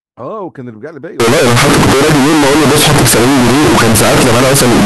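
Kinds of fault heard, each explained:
Signed and unsigned mixed up: From about 1.2 s to the end, the speech turns into very loud, harsh distortion, with pauses as loud as the rest. The likely cause is 16-bit samples being read with the wrong sign convention, so the top bit flips and every zero crossing jumps across the full range. On a waveform the trace jumps between its highest and lowest extremes with sharp steps. On a spectrogram broadband energy fills every frequency from top to bottom.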